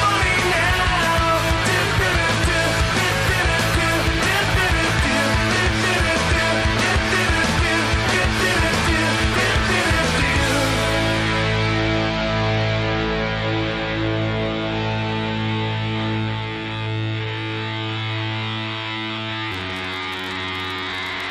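From 19.51 s to the end of the clip at 21.30 s, a block size mismatch (padded) sets in. One stage hands over blocks shorter than the next stage expects, and the shortfall in each is filled with silence, which fits a 512-sample read. The repeated gaps produce an 86.1 Hz buzz, and the sound drags to 0.861 of its proper speed. Unlike a simple slowdown or resampling error, the timbre stays about where it should be.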